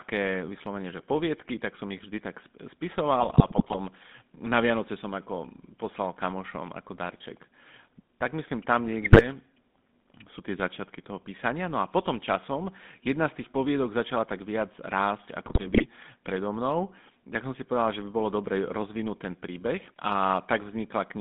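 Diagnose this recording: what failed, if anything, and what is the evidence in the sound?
Throughout, the speech has a buzzy, gravelly roughness and a narrow telephone band of about 150 Hz to 3.6 kHz. That points to the codec stage, GSM full-rate coding at 13 kbps. It resynthesises the vocal tract from a sparse, regularly spaced pulse excitation, which leaves plainly audible coding damage.

Squawks, pops and gargling break through at 3.20–3.77 s, at 9.04–9.27 s just after "myslím tam", and at 15.46–15.85 s. These are GSM bit errors from the network link. Corrupted filter, pitch or gain parameters distort the spectrum or level of each decoded frame they hit.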